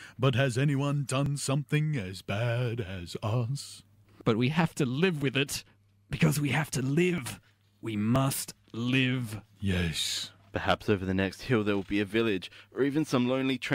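Overlap between stream segments at 1.26–1.29 s (after "has anyone", before "something as"), 4.21 s, 7.18 s (after "we have to") and 8.16–8.19 s: overlapping segment timestamps trim real speech, so the waveform jumps, heard as brief clicks or skips, consistent with one-second segments.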